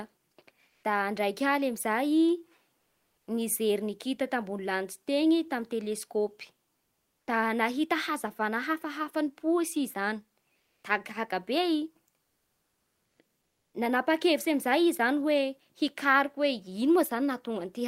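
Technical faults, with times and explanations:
0.69–0.83 s, 2.77–3.27 s, 6.79–7.27 s, 10.59–10.83 s and 12.23–13.19 s: comfort noise in place of the background. In each pause, the real background gives way to flat, featureless hiss. The level steps up or down by about 2 to 6 dB. This is likely Opus discontinuous transmission filling silence with synthetic noise.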